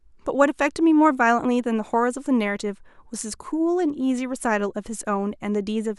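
No technical faults are audible.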